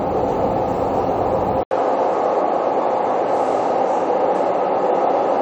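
At 1.63 s the sound drops out for about 80 ms. When it returns, nothing reaches above 10.5 kHz, so the top end sounds dull and boxed in. A faint new noise floor sits roughly 40 dB under the sound. The level stays about the same. This persists to the end. The cause is likely an input switched to a poorer device, another microphone or a headset's call profile with a narrower band and its own noise.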